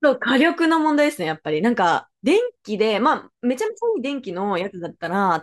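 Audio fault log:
Nothing to flag here; I listened through this bit of speech and didn't catch any technical problems at all.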